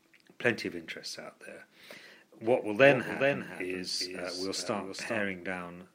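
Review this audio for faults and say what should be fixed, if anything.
Doubled audio track, 2.44–5.30 s: a copy about 5 dB quieter trails roughly 400 ms behind, likely from a slower second capture path, and shows as spectrogram patterns repeating with abrupt edges. To prevent it, record through a single capture path and mute any duplicate input or monitoring return.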